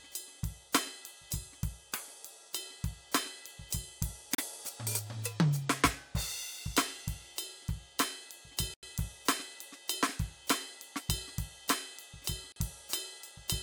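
Bluetooth stalls hit this music at 4.35 s, 8.74 s and 12.52 s: the sound drops to silence for 37, 90 and 39 ms, then resumes, likely because delayed wireless packets emptied the headphones' buffer.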